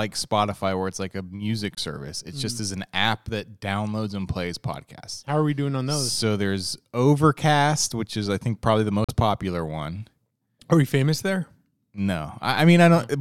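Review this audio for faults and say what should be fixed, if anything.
Two silent gaps cut the speech, at 1.75 to 1.79 s after "where it's like a" and at 9.04 to 9.10 s between "I think probably the" and "popular one". The sound resumes as if it had played on, the signature of a likely Bluetooth dropout, where late packets are discarded. Keeping the headphones close to the source and away from crowded 2.4 GHz traffic would prevent it.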